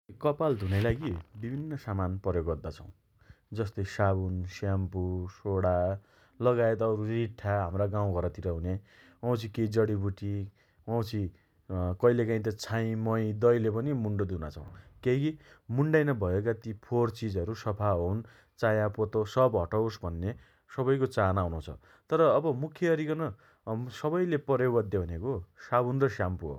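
At 2.89 s and again at 14.67 s there's a repeated buffer. New audio didn't arrive in time, so the device played the last chunk a second time. The repeated piece is tiny, which fits a 10 ms buffer, so you won't hear a stutter so much as a quick click with a hard join. Each time, roughly a hundredth of a second of the real speech goes missing while the repeat plays.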